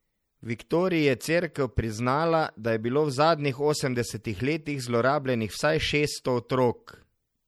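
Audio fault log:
Throughout: MP3 compression, likely, and it's plainly audible. The speech has that watery, swirly quality you get when the encoder is starved of bits: quiet frequency components drop in and out from frame to frame, so the texture shimmers. The s sounds come out chirpy and metallic, and consonant onsets smear. The amount of damage fits a low bitrate, around 64 kbps.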